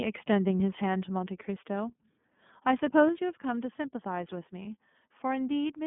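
The speech is carried by the iLBC codec, whose 13.33 kbps rate fits its 30 ms frame mode; the line passes only about 150 Hz to 3.4 kHz, leaving the sound muffled, slightly rough and synthetic throughout. At 0.57 to 0.61 s, lost iLBC frames, consistent with a single missing 30 ms packet, are concealed by repeating the last pitch cycle, producing a brief buzzy held tone before the sound recovers immediately. Twice the level drops abruptly, by about 2 dB at 1.02 s and by about 4 dB at 3.09 s, most likely because the call software stepped the microphone volume down. Just before the second drop, at 3.0 to 3.03 s, likely microphone overload pushes peaks about 1 dB past the converter's limit, flattening their tops and adding a harsh, crackling edge.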